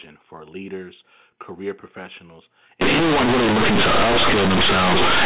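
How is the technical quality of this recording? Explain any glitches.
The recording has one serious fault in its second half, on top of a telephone-band signal limited to 4 kHz.

From 2.81 s to the end, companded audio is read as linear: mu-law bytes are played as raw 8-bit samples without expansion. Sign changes swing across half the range and quiet passages are inflated, giving loud, buzzy, distorted speech with heavy noise in pauses.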